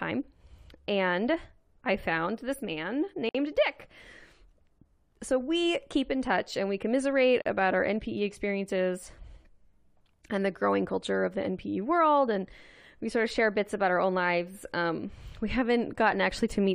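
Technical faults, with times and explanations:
3.29–3.35 s and 7.42–7.46 s, gaps at joins of encoded pieces: the speech breaks off in gaps of about 56 ms and then 37 ms, with smeared edges, before resuming where it stopped. The encoder's start-up delay and last-frame padding were left untrimmed at each join.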